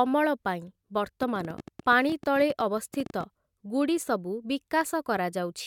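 From 1.23 to 3.24 s there's a train of clicks, around twenty sharp pops at roughly 11.5 per second, unevenly spaced and peaking about 5 dB above the speech. They tick away through gaps too, which likely points to interference or a struggling interface injecting pulses.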